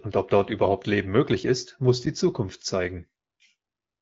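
No technical faults can be heard in the speech, which comes through the AMR wideband (HD Voice) codec at 12.65 kbit/s.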